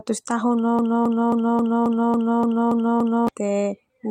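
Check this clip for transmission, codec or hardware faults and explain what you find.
Two faults stand out.

From 0.79 to 3.28 s the sound stutters in a broken-record loop: the same 0.27 s fragment plays nine times back to back, and whatever should have come in that stretch is missing. The player, encoder or stream likely stalled and kept resending its last buffered piece.

Between 1.95 and 2.93 s there are scattered short gaps, heard as brief ticks and smears over the repeating fragment. Around seven tiny packet losses, the longest about 15 ms and totalling roughly 50 ms, were each covered by stretching the preceding sound across the hole.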